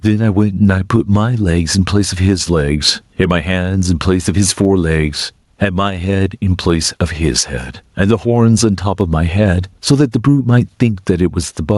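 Gain pumping runs through the whole of this speech recording. The level swings by roughly 15 dB. Loud and quiet passages sit unnaturally close together, and the sound feels squashed and breathing. The likely cause is input gain set far too high, with a fast limiter or compressor clamping down on each loud moment and releasing in the gaps.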